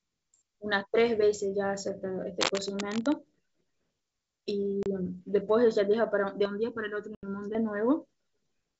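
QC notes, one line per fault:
2.40–3.14 s, cable scratch noise: a dense, uneven rustling scrape sits on top of the speech for about three-quarters of a second, at roughly 5 dB below the speech level, so it's quite prominent. It sounds like a contact whose resistance jumps about rapidly while it's moved, most likely a worn cable, connector or control being handled. Each resistance jump becomes a small noise burst, and together they smear into that scratchy texture.
4.83–4.86 s and 7.15–7.28 s, packet loss on an ADPCM call: two hard-edged dropouts, the first 30 ms long and the second 80 ms, which suggests a few packets and then several more going missing. The line is G.722, an ADPCM codec, so the decoder's predictor and step size lose track of the sender's during each gap. When the speech comes back it's slightly distorted, and it settles within a few tens of milliseconds.
6.45–7.55 s, channel delay (comb filtering): for just over a second the speech turns hollow and phasey. 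One channel lags the other by a bit under a millisecond, and once the two are summed to mono, the content they share cancels at evenly spaced frequencies. The first notch lands around 700 Hz, and the rest repeat up the spectrum about every 1.4 kHz, so the dip sits right in the body of the voice. This overlaps the second dropout near 7.2 s.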